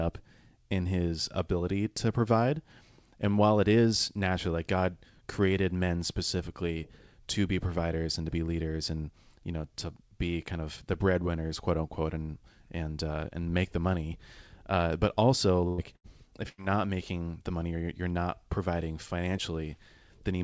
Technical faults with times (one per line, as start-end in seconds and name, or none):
15.68-16.07 burst of packet loss
16.49-16.61 burst of packet loss